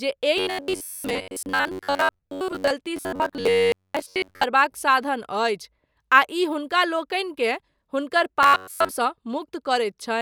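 A rigid, metallic buzz fixed near 94 Hz runs through the speech from 0.37 to 2.71 s, 2.97 to 4.44 s and 8.43 to 8.91 s. This is robotic sound from repeated short buffers: audio likely arrived too seldom, so roughly 11 ms chunks were replayed for most of each stretch.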